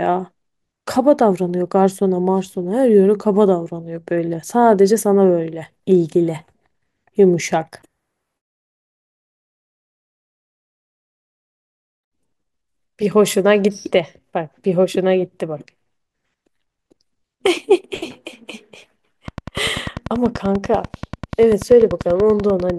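Speech recording with a train of clicks from 19.28 to 22.71 s: regular, same-shaped pulses at 10.2 per second, around forty in all, peaking about 5 dB above the speech and audible in pauses. Likely cause is electrical interference or a faulty connection or power supply.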